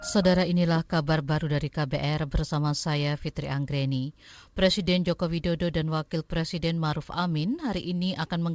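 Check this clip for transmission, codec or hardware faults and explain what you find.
No transmission, codec or hardware faults are audible; the speech shows only the expected band limit of a wideband call path, with nothing above 8 kHz, consistent with G.722.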